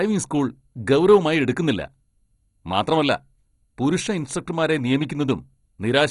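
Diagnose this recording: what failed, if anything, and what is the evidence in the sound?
The codec stage failed: across the whole speech clip the sound is dull, with nothing above 11.2 kHz, and carries a gurgling, granular roughness, likely from heavy MP2 compression at a rate around 56 kbps. Sub-bands starved of bits switch off or quantise coarsely. A plain low-pass filter would dull the sound but leave no granular texture.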